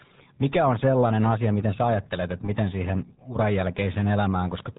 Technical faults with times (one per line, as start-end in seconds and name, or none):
0.00-4.79 RealAudio 14.4 codec